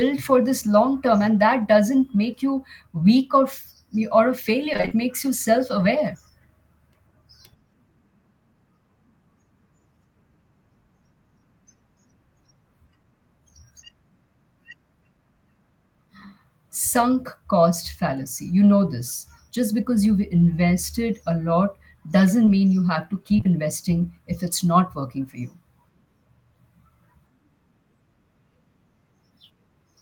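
A speech recording with two kinds of transmission fault. From 4.73 to 4.93 s, between "or a" and "makes you self aware", repeated packet loss (robotic sound) sets in. Five gaps, the longest 26 ms, leave about half that stretch patched by extending the preceding sound, giving a choppy texture. Short concealed packet loss follows at 22.45 to 22.49 s, just before "mean you have to", and again across 23.37 to 23.47 s, ending before "investing if it's not". Each of these holes is about 20 ms. The decoder bridges them by continuing the last waveform and crossfading back into the real signal, so they come across as brief smears or wobbles.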